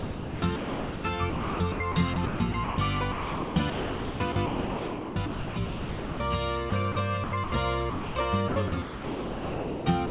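Sound chopped by the voice detector runs from 0.00 to 1.04 s, 1.30 to 2.78 s, 3.12 to 6.20 s, 6.70 to 6.96 s, 7.24 to 7.52 s and 8.48 s to the end. The sender's voice detector likely kept misjudging quiet parts as background and toggling transmission, so the receiver slipped in comfort noise. About 0.9 s, 0.74 s, 2.5 s, 60 ms, 160 ms and 1.2 s of each stretch are synthetic hiss, and the sound stutters.

Sound dropped by the voice detector occurs from 7.90 to 8.16 s. Here the detector likely decided the signal was background and stopped sending altogether. The receiver filled the whole 260 ms with steady comfort noise, so the sound simply gives way to steady noise or near silence and resumes once the detector triggers again. Throughout, the audio stays band-limited, with nothing above 4 kHz, which fits a narrowband call codec.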